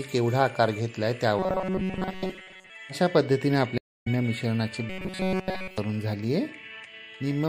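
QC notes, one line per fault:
throughout, MP3 compression: The whole clip has a watery, swirling texture with smeared attacks. The codec damage is plainly audible. The likely cause is MP3 encoding with too few bits, consistent with a low bitrate around 64 kbps. Weak frequency components flicker in and out from frame to frame, which produces the swirl.
1.39–2.70 s and 4.90–5.78 s, robotic sound from repeated short buffers: The sound turns into a rigid, metallic buzz at 188 Hz that only loosely tracks the underlying audio. The buzz is heavy in the first span, where most of the material is replaced, and total in the second, where nothing real gets through. The likely cause is new audio arriving too seldom. The player fills the gaps by looping the last slice, about 5.3 ms long, which imposes the fixed 188 Hz pitch.
3.78–4.08 s, stream reconnect: The audio drops out for 280 ms. It then comes back at a point roughly a fifth of a second further on, so a short stretch of material is missing rather than delayed. 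The connection broke, the player sat silent while it reconnected, and a fresh decoder picked the stream up mid-flow. That is why playback jumps ahead instead of resuming where it stopped.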